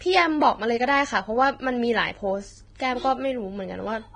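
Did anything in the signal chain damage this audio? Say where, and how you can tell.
Yes, at the codec stage, and it runs through the whole speech clip. Nothing is present above 9.7 kHz, a hard ceiling set by the encoder. The treble below that edge sounds hissy and grainy. Consonant onsets are smeared, and voiced tones have a rough texture. This is likely Vorbis compression at a very low setting, which fits a bitrate near 22 kbps. The encoder quantised the upper residue so coarsely that fine detail was replaced by noise of similar energy.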